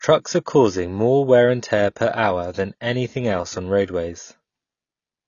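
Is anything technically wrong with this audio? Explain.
Yes, one issue. Throughout, the speech stops dead at 7 kHz, so it's likely low-bitrate audio saved at a high bitrate, maybe a lean AAC file re-encoded as a roomy MP3.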